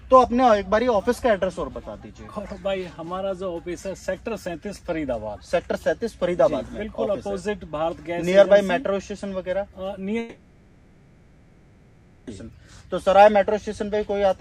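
From 10.19 s to 12.30 s the sound gives way to a fading buzz or hiss continuation for about 2.1 s, then resumes with that stretch gone. That's likely a long network dropout, with the receiver papering over missing packets.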